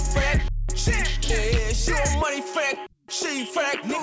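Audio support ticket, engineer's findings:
Skip ahead at 1.30 s: playback jumps forward with no gap, around 0.4 s of audio gone. The jitter buffer probably dropped queued audio and spliced both sides almost directly.

Jitter buffer speed-up, 1.50 to 3.98 s: audio runs 4% fast at unchanged pitch. The buffer was trimming pitch-period chunks to shed excess delay, about a tenth of a second in total. The G.722 call path is band-limited to 8 kHz.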